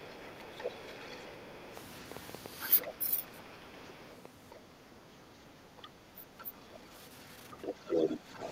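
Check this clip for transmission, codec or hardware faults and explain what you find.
Four kinds of fault are audible: echo leaking in, speech ducked during double talk, a train of clicks, and background gating.

The other side's voice is leaking through in four places. The likely cause is a loudspeaker on the talker's device feeding the far end into the microphone, with the echo canceller failing to remove it. A faint second voice sits about 30 dB under the speech from 0.0 to 1.67 s and about 35 dB under from 2.86 to 4.51 s. A brief scrap appears at 6.39 to 6.45 s. From 7.61 to 8.51 s it is much stronger, only about 10 dB below the speech.

Speech suppressed in double talk shows up three times, each likely caused by the canceller confusing the talker with the echo while both sides spoke and turning everything down. From 0.65 to 1.21 s the voice dips only slightly, about 5 dB. From 2.81 to 3.27 s it sinks around 15 dB. 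From 5.81 to 6.54 s it drops roughly 25 dB, so the voice dips for a few hundred milliseconds each time.

A train of clicks runs from 1.77 to 6.77 s. Its likely cause is interference from nearby equipment or a faulty connection injecting a repeated pulse. About six clicks a second arrive at an uneven pace, roughly thirty in all, each near the level of the speech itself. They are heard as a ragged ticking laid over the sound and continuing through the gaps.

Background gated by the echo canceller occurs between 4.64 and 5.53 s. While the far end was playing, the canceller clamped the microphone hard, pulling the room sound down by about 10 dB for most of that stretch. The ambient bed audibly sags and then swells back once the canceller releases.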